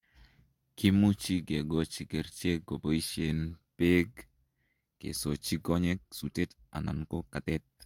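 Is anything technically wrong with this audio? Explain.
Yes. This speech clip has a time-stretched section. It runs from 5.68 s to the end. There the pace jumps abruptly to about 1.64 times the earlier speed, while the pitch stays where it was. The likely cause is software squeezing this part to fit a set length. It keeps the pitch by dropping short pieces of the audio rather than playing it faster. The result sounds rushed compared with the start of the clip.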